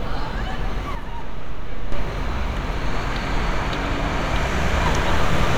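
From 0.95 s to 1.92 s, one channel drops out, most likely because one side of the stereo feed briefly stopped carrying signal while the other continued. After the mono sum, the content shared by both channels loses half its contribution, so the level falls abruptly by about 6 dB at 0.95 s. The sound comes back to full level just as suddenly at 1.92 s, giving a distinct step down and then back up.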